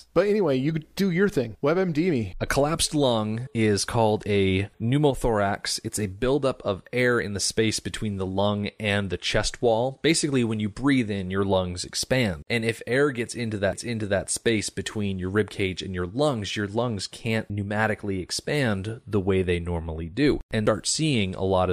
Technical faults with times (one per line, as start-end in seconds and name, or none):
13.72 CD skip
20.66 CD skip